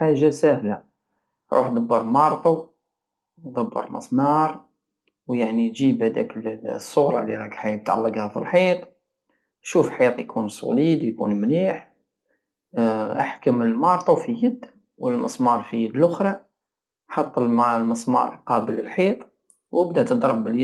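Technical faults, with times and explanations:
Nothing here counts as a technical fault; the speech comes across as you'd expect from an Opus call path at 32 kbps, where the top end stops at about 12 kHz.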